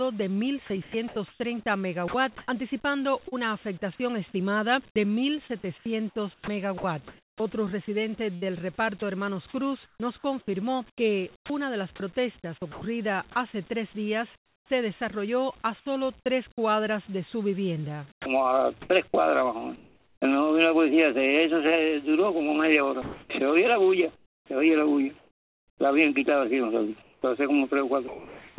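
From 0.82 to 3.34 s the sound is chopped by the voice detector, all of it carried on a narrowband call path with nothing above 4 kHz. It keeps cutting in and out, with about half a second of quieter material swapped for flat hiss, likely a sender's detector flipping between sending and not. The same choppiness comes back from 4.90 to 12.82 s, losing about 1.3 s in total, and again from 23.02 to 28.58 s, where about 2 s goes.

At 14.36 to 14.70 s there's comfort noise in place of the background. The real room sound gives way to a steady, featureless noise that's about 17 dB quieter, likely synthetic fill played while transmission paused. It happens again at 19.76 to 20.22 s, this time only about 4 dB down.

From 18.12 to 18.26 s the sound is dropped by the voice detector. Roughly 70 ms of quiet material disappears into 140 ms of steady noise before the sound picks back up, likely because the detector took that stretch for background.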